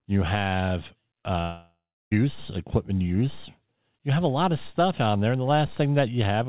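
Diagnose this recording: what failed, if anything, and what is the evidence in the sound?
A short concealed packet loss occurs at the network and jitter-buffer stage just after "you have", from 1.22 to 1.25 s. About 20 ms of audio never arrived in time, and the decoder covered the gap by extending the preceding sound before crossfading back. The result is a brief smear or wobble. On a waveform the cycles repeat too regularly, and a spectrogram shows a short patch of smoothed, stretched harmonics. The band stays capped at 4 kHz, which fits a G.711 mu-law call path.

A long network dropout follows, still after "you have", running from 1.41 to 2.13 s, roughly 0.7 s. The audio lost in this span never returns. Playback resumes at "equipment use". Concealment first continues the last sound as a buzzy tail that decays, and about 0.3 s of silence then remains. A waveform shows a fading envelope falling to flat, and a spectrogram shows smeared harmonics dissolving into a blank band. 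The likely cause is a burst of lost or late packets.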